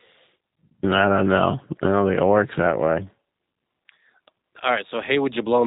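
It's a speech clip, and the whole thing carries the sound of the G.729 codec. Everything stops at around 3.8 kHz, so it has that boxed-in telephone quality. The roughness is plainly audible too: a slightly buzzy, synthetic edge where the voice is being rebuilt from a vocal tract filter, a pitch predictor and a handful of pulses per frame rather than passed as a waveform. All of that fits G.729A running at 8 kbit/s.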